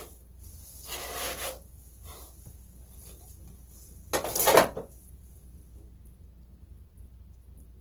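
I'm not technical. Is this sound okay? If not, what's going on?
No. From start to finish the sound is rough and grainy, and clean tones take on a noisy, fizzy edge. This is most likely Opus compression squeezed too hard. The encoder ran short of detail and filled the gaps with copied or noise-like texture.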